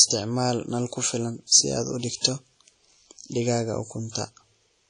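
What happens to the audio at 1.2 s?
WMA compression, likely, colours 1.2 s as it does the whole clip: a transform coder at around 32 kbps smears quantisation noise over long blocks and zeroes weak detail, so the speech rings and sounds washy, with breathing hiss and nothing above 10.1 kHz.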